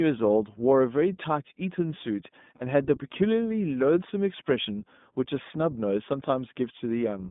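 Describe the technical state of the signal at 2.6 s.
At 2.6 s there are lost iLBC frames from 2.56 to 2.62 s. About 40 ms of packets drop out, and the decoder fills the gap by repeating the last pitch cycle mixed with noise, heard as a brief buzzy held vowel that recovers immediately. Underneath, the iLBC codec limits the band to roughly 150 Hz to 3.6 kHz, with a plainly rough, synthetic texture consistent with the 20 ms, 15.2 kbps mode.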